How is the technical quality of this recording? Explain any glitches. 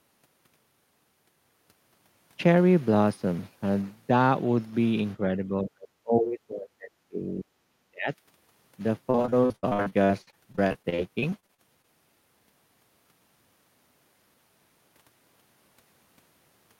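The recording has two kinds of fault, both in its middle section.

From 5.37 to 7.52 s and again from 7.69 to 8.09 s there is speech suppressed in double talk. The echo canceller likely mistook overlapping talk for echo and turned the speech down, cutting it by roughly 35 and 40 dB.

From 9.10 to 11.85 s there is repeated packet loss. Frequent dropouts, the longest 70 ms, were patched by stretching earlier sound over about 28% of the stretch, which makes the speech choppy with pieces missing.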